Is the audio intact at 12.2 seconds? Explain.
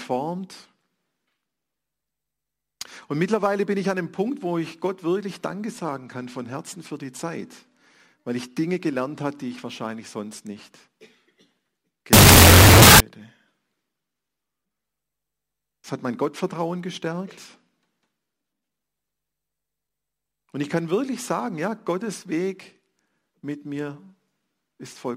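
No. At 12.2 seconds the audio is inside a wrong sample width fault running from 12.13 to 13.00 s. The 16-bit samples are being read as unsigned 8-bit, so single bytes become samples and high and low bytes alternate. The speech is buried in loud noise, at half speed and an octave low.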